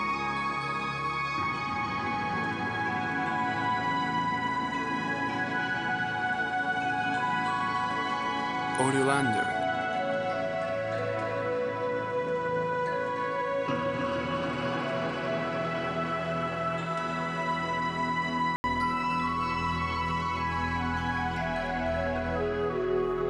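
From 0.0 to 18.64 s the audio is band-limited, with nothing above 10.5 kHz, and carries a steady noise floor well below the signal. At 18.64 s an 80 ms gap precedes fuller sound with no real level jump, likely an input switched to a poorer device for that stretch. A spectrogram shows a flat ceiling that lifts after a thin blank column; the waveform shows the brief flatline.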